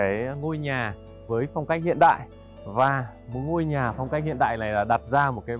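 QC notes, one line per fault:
No faults heard.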